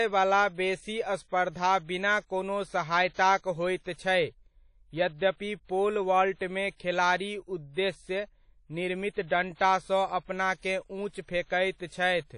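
A speech recording with a ringing, washy quality throughout, a hiss that swells and fades with the voice, and no content above 10.1 kHz; this is likely WMA compression at a low bitrate, consistent with about 32 kbps. At 9.27 to 9.31 s a brief hiss of roughly 34 ms arrives just before a sharp attack and softens it. This is pre-echo: the codec spreads quantisation noise across its whole block, including the quiet moment before the onset.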